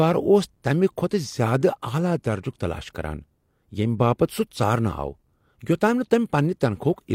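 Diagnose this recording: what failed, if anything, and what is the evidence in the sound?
Nothing in the signal chain has failed: the speech arrives continuous and intact, with no dropouts, discontinuities or damage to point at any stage from capture to playback.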